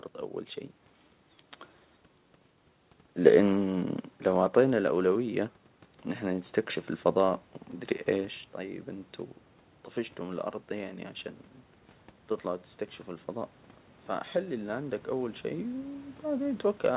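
From 14.33 s to the end of the clip, the speech and the room noise behind it swell together, growing steadily louder over more than two seconds. This is automatic gain rising: the gain control judged the input too quiet and kept turning it up.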